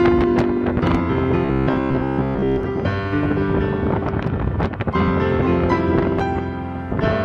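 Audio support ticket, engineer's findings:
Robotic sound from repeated short buffers, 1.45 to 2.63 s. Rigid metallic buzz at 66.8 Hz. Likely a starved audio buffer. A chunk of about 15 ms repeats in place of most of the real audio, imposing a buzz at one over its length.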